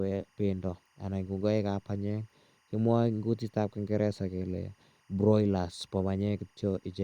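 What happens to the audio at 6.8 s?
At 6.8 s the speech still carries timecode bleed, present for the whole clip: linear timecode at 24 frames per second leaking from an adjacent line, a faint chirping warble around 1 and 2 kHz, roughly 40 dB down, showing as two steady spectrogram bands.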